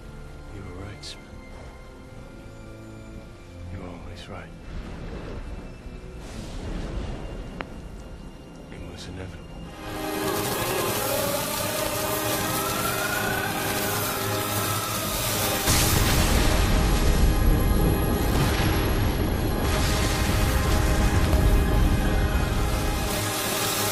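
A couple of problems show up in the audio. There's a loud pop at 7.61 s and a quick double pop at 21.25 to 21.35 s, each roughly 15 dB above the surrounding sound, which keeps going underneath; a plug, switch or static discharge is the likely cause. At 15.66 s and 18.38 s, compressed frames are skipped: the audio jumps ahead around 70 ms and then about 50 ms.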